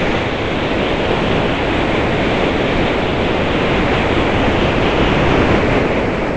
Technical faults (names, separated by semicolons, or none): sound dropped by the voice detector